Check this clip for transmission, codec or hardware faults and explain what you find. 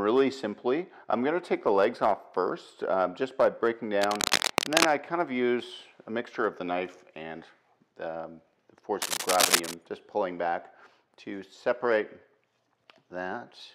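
Two bursts of cable scratch noise, from 4.02 to 4.91 s and from 9.02 to 9.74 s. A worn connector or lead being moved is the likely cause. Its shifting contact adds ragged scratching, roughly as loud as the sound itself.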